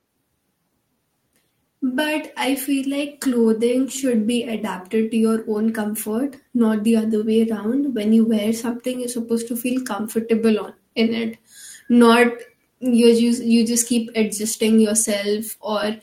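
Clock drift between sender and receiver runs throughout the speech. The sender's clock is about 3 percent slow against the receiver's, so the jitter buffer keeps draining and the receiver must stretch the stream to avoid running dry, giving a faintly unsteady pace.

Repeated timing corrections run from 0.22 s to 15.97 s. The receiver keeps repeating short pieces, all lengthening the audio, unevenly spaced, playing at about 98 percent speed and adding roughly 0.4 s overall, heard as small hiccups and a slightly dragging tempo.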